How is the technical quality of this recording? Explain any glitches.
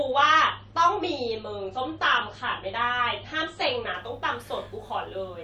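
The quality is limited at the start by one fault. From 0.0 to 3.94 s, the adaptive stream starts at a low bitrate. The player opens on a lean version of the stream so playback begins quickly, then switches up once it has gauged the connection. Until 3.94 s the speech sounds dull and smeared, with nothing above about 8.3 kHz and coarse codec artefacts, which fits a 32 kbit/s MP3. At 3.94 s the treble and clarity return abruptly, with no gap, consistent with a step up to about 128 kbit/s.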